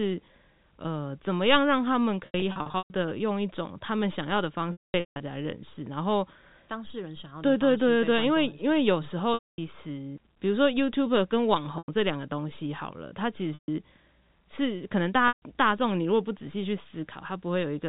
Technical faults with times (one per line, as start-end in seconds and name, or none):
2.26-2.94 packet loss with pitch repetition
4.72-5.20 packet loss with pitch repetition
9.34-9.58 packet loss with pitch repetition
11.78-11.88 packet loss with pitch repetition
13.54-13.68 packet loss with pitch repetition
15.28-15.42 packet loss with pitch repetition